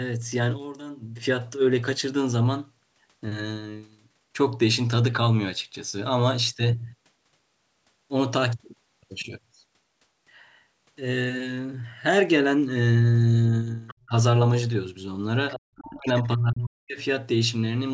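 A speech clip with two echo-cancellation problems. The other side's voice leaking through appears from 13.87 to 14.09 s and from 15.51 to 15.6 s: a faint second voice, about 25 dB and then about 15 dB below the talker. It is likely residual loudspeaker echo the canceller missed. It differs from background chatter because it arrives in short scraps tied to the far end rather than as a steady second source. Speech suppressed in double talk follows each leak: a brief dip of about 10 dB at 14.09 to 14.14 s, then a deep cut of roughly 40 dB lasting about a second between 15.62 and 16.99 s. The likely cause is the canceller ducking both sides while they overlapped. Unlike a packet dropout, the talker's level is turned down while the far side plays rather than the stream itself dropping out. The call's microphone processing is audible in the band limit, with nothing above 8 kHz.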